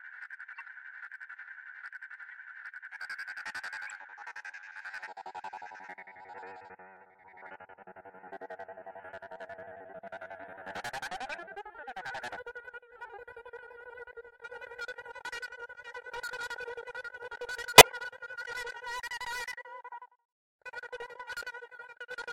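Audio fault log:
Throughout, hard clipping: the signal was driven about 22 dB beyond what one stage in the chain could pass, so every peak is cut flat, and a noticeable share of the waveform sits pinned at the limit. Those squared-off tops add harmonics far up the spectrum. With this much overload, the result is a harsh, gritty fuzz riding on every loud moment of the sound, not just occasional crackle on the highest peaks.
0.54–0.65 s, 2.31 s, 3.86–3.92 s, 11.32 s and 17.78–17.91 s, corrupt frame decoded: damaged compressed frames, a handful at a time, reached the decoder and were played anyway. The misread gains and codes put energy at the wrong frequencies for the length of each bad frame. The result is brief chirps and bursts of noise. The one at 2.31 s is very faint. The ones near 0.6 s, 3.9 s and 11.3 s are modest. The burst at 17.78 s comes close to full scale and stands out sharply.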